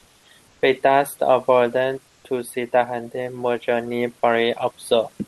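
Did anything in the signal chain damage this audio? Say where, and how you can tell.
Yes, at the call-processing stage. Comfort noise in place of the background shows up twice: 0.47–0.62 s (150 ms) and 2.07–2.24 s (170 ms). In those gaps the room tone, sitting about 40 dB under the loud parts, turns into a smooth, featureless hiss roughly 1 dB quieter. The likely cause is Opus DTX: the sender stopped transmitting during the pauses, and the receiver filled in synthetic noise, all carried over a call path band-limited to around 12 kHz.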